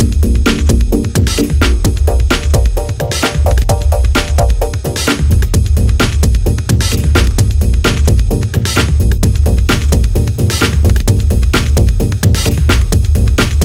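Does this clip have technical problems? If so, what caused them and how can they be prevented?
Yes. Crude rate conversion is audible from 9.43 s to the end of the clip at 13.64 s: a gritty, inharmonic fizz rides on the louder and brighter parts of the sound. The rate was stepped up without filtering by repeating the nearest sample. The pattern fits a change from 44.1 kHz to 48 kHz. The repeats fall in a regular cycle that produces tones unrelated to the material, sitting roughly 30 dB below the signal. To prevent this, use a proper band-limited resampler, or keep the whole chain at one sample rate.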